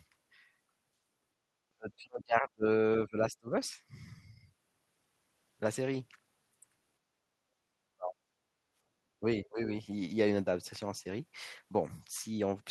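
At 1.36 to 1.41 s the speech drops out in a brief cut of roughly 35 dB, then dips again from 1.75 to 2.66 s by a similar depth and from 3.04 to 3.48 s by around 20 dB. The speech dips, the signature of speech suppressed in double talk. The likely cause is an echo canceller that could not separate the local talker from loudspeaker echo while both sides spoke, so it attenuated everything. A deeper dip of roughly 40 dB follows at 7.95 to 8.22 s.

From 8.50 to 8.93 s the room sound itself sinks by about 10 dB and then recovers. This is background gated by the echo canceller: with the loudspeaker active, the canceller clamped the microphone path and released it shortly afterwards. At 9.21 to 9.60 s a final, shallower speech dip of around 15 dB repeats the double-talk suppression.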